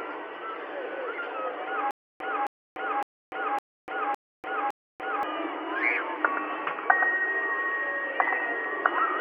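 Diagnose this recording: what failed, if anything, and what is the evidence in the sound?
From 1.91 to 5.23 s, a 266 ms burst repeats six times between 293 ms silences: stutter with silent gaps, likely a stalled playback stream replaying its last fragment.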